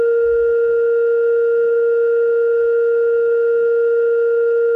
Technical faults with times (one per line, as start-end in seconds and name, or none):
none